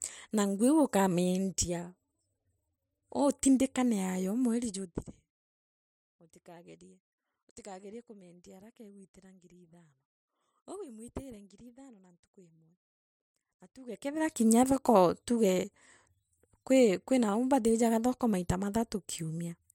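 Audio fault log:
13.78–14.3 s, zipper noise: across about half a second the speech level moves by roughly 25 dB, but in discrete jumps instead of a continuous ramp, at around a hundred steps a second. Each jump is an abrupt discontinuity in the waveform that produces a tiny click, and the rapid run of clicks forms a buzzy ticking over the speech that stops once the level settles, just before "kinya thoko tuge".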